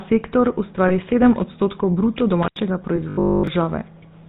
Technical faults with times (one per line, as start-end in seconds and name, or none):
0.00-4.28 GSM full-rate codec
0.88-0.91 lost GSM frames
3.09-3.47 robotic sound from repeated short buffers